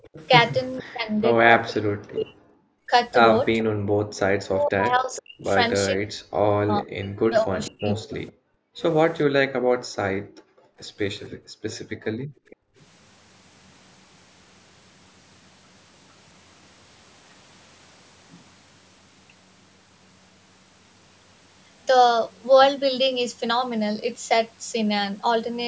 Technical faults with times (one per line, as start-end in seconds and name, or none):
0.00-0.28 echo leak
0.81-2.91 speech suppressed in double talk
3.64-4.19 background gated by the echo canceller
4.48-8.16 speech suppressed in double talk
5.14-5.22 echo leak
7.65-8.32 echo leak
8.44-12.77 background gated by the echo canceller
12.48-12.83 echo leak